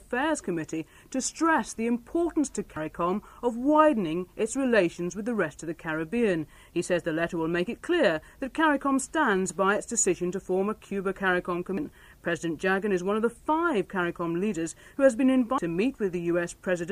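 The audio has compressed frames skipped at 2.77 s (about 100 ms lost) and at 11.77 and 15.58 s (about 300 ms each), jumping ahead in whole 92.9 ms frames.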